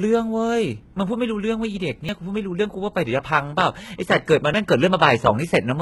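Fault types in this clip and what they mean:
HE-AAC compression: The audio was likely squeezed through HE-AAC at a very low rate, the heavy damage fitting something near 16 kbps. Only the lower band is truly coded; the treble is rebuilt by copying lower bands upward under a coarse envelope. Across the whole speech clip the top end sounds bright but synthetic, with harmonics that don't line up over the crossover, so s sounds come out gritty, metallic or lisped.
audio missing between chunks: The recorder or processor, likely handling the audio in 2.5 s chunks, dropped a sliver each time it closed one block and opened the next, splicing the two sides together with no gap. Here that produces two abrupt skips, at 2.09 s and 4.54 s, each losing something like a twentieth of a second, making the speech jump forward.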